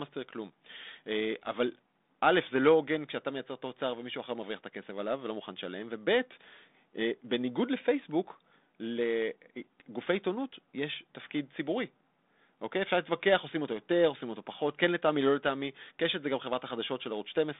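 No technical faults are audible in this speech.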